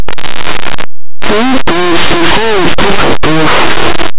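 Speech, and it is buried in very loud, harsh distortion from start to finish. This is linear audio read as companded: plain linear 8-bit samples are being decoded as mu-law codes. Small sample values just to one side of zero come out as the loudest mu-law outputs while their mirror values stay quiet, so the quiet parts blast to the top of the range.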